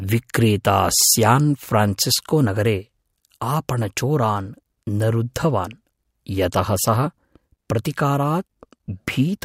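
No technical faults can be heard anywhere in the speech. Nothing in the recording or playback chain draws attention to itself at any point.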